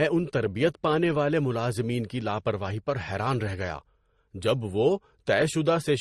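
From start to finish the speech carries layered coding damage, most likely transcoding between lossy codecs, with the sound pointing to an MP3 stage near 43 kbit/s re-encoded as Opus at about 32 kbit/s. The second encoder spends bits reproducing the first one's smearing and adds its own, so swirly, watery highs sit over a dull tone. A spectrogram shows a hard ceiling at 12.1 kHz, with blotchy, patchy energy beneath it.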